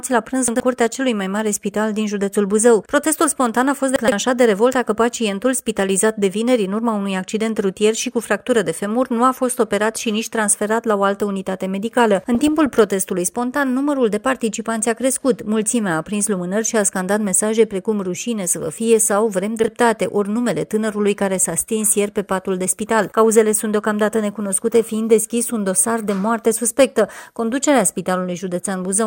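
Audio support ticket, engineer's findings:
Chunks out of order at 0.48–0.6 s, 3.96–4.12 s and 19.6–19.68 s: jumbled audio with three hard joins each, consistent with 40 ms blocks delivered late by the buffer. Nothing drops out, unlike packet loss.

DAB burbling at 12.35–12.74 s: short noise blips in single sub-bands, as receiver bit errors at a few tenths of a percent get past error correction. Unlike dropouts, the audio keeps running underneath.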